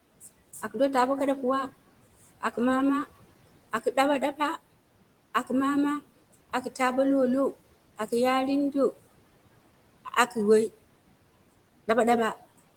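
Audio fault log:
throughout noise suppressor artifacts: the suppressor works band by band, cutting the room noise by about 18 dB in the gaps in speech and easing off under it, so the background rises and falls with the talking. Unlike a gate, it never drops to true silence.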